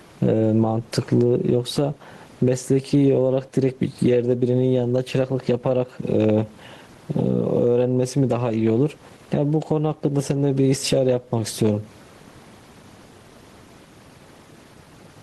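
Throughout the recording, the microphone gain is likely set far too high, with a fast limiter or compressor clamping it down each time the speech gets loud and releasing it in the pauses. The result is gain pumping: the gain swings by around 15 dB, and the room noise sits about 40 dB below the speech. Loud and quiet passages sit unnaturally close in level, so the speech sounds squashed.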